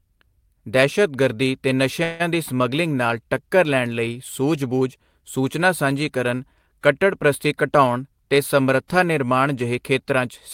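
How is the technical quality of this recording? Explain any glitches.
There's one glitch worth flagging, a call audio freeze in the speech from 2.03 to 2.22 s. The last sound gets stretched into a fading buzzy hiss, then the speech picks up exactly where it stopped. That's likely packets arriving late and the jitter buffer running dry. Nothing's lost, but everything afterwards lands about 163 ms later.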